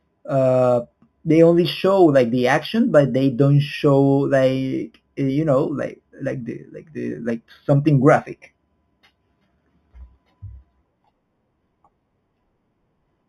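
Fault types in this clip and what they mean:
Imaging from linear upsampling, throughout: the speech fits an 8 kHz original raised to 44.1 kHz by straight-line interpolation, a weak filter, so the highs are dulled and a mirrored band sits at 4 to 8 kHz, roughly 30 dB down, adding a faint metallic shimmer to sibilants.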